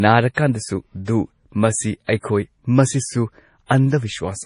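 Speech throughout is dulled and watery, with nothing above 10.5 kHz and swirling, metallic sibilants, likely from MP3 compression at a bitrate as low as 32 kbps, unlike plain low-pass filtering, which leaves no swirl. Pre-echo puts a brief hiss just before sharp onsets at 2.04 to 2.09 s, 2.18 to 2.23 s and 3.66 to 3.70 s, lasting 42 to 57 ms; it is distinct from a click or reverb because the noise comes before the attack, not after.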